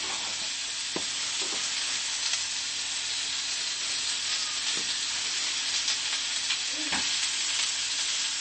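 MP3 compression runs throughout: nothing sounds above 8.3 kHz, with a watery, swirling texture, likely from a low-bitrate MP3 encode that fits 32 kbps, dropping weak frequency lines.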